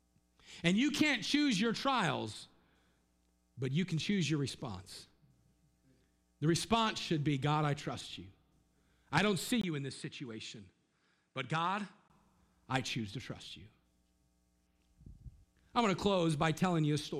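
An input switched to a poorer device runs from 9.61 to 12.1 s, right after "I don't see". A gap of about 20 ms opens at 9.61 s. The speech then comes back about 5 dB quieter and duller, with nothing above 10.5 kHz and a new noise floor about 50 dB below the signal. This likely comes from the recording path changing to a narrower-band microphone. Full clarity returns at 12.1 s, just before "I choose to trust".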